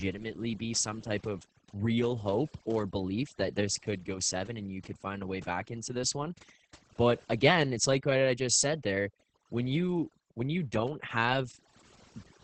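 Overdone noise removal runs throughout the speech. The suppressor cut individual frequency bands deeply wherever they resembled its noise estimate, taking quieter parts of the voice along with the noise. The background drops and breaks up into twinkling specks.

Opus voice compression, also present from start to finish, is heavy. The linear-prediction speech coder caps the band at about 8 kHz and codes the excitation coarsely, which fits a bitrate around 10 kbps. The voice comes out muffled, hoarse and slightly robotic.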